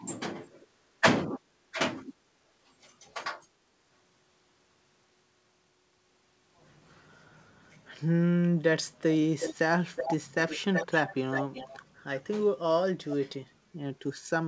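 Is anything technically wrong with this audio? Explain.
Yes. An echo leak appears between 9.39 and 11.8 s, in bursts at 9.39–9.55, 9.95–10.15, 10.47–11.15 and 11.31–11.8 s. A discrete copy of the speech returns 367 ms late and only about 5 dB below it, likely from a far-end loudspeaker whose echo canceller let the microphone pickup through. Unlike room reverb, it is a separate, fixed-delay repeat rather than a smeared tail. The band stops at 8 kHz, consistent with a G.722 call path at 64 kbps.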